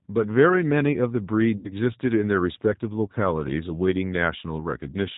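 From the start and right through, the speech carries the sound of the G.729 codec, plainly audible here: nothing above 4 kHz survives, and the voice is rebuilt from a vocal-tract model and a few pulses per frame at 8 kbit/s, which leaves it rough and faintly synthetic. That steady model-built texture sets it apart from an ordinary low-pass filter, which would muffle the sound without adding any artificial grain.

At 1.57 s, VoIP packet loss concealed by the speech codec begins. About 70 ms of audio is missing, which fits seven lost 10 ms frames. The decoder stretches its last pitch and filter into a buzzy tone or coloured noise that fades. Recovery isn't clean, because each frame depends on the one before, so the voice stays weak for a short while after 1.72 s. A plain dropout would go silent, and a click would be far shorter.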